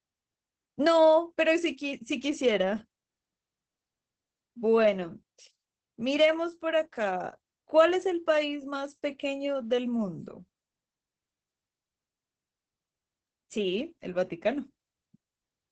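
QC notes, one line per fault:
Throughout, Opus voice compression: the SILK coder runs starved of bits, consistent with about 10 kbps, so it cuts the band at 8.8 kHz and codes the excitation coarsely. The speech sounds muffled, hoarse and slightly robotic, with heavy codec damage.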